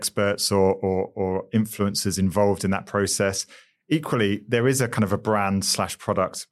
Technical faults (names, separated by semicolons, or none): none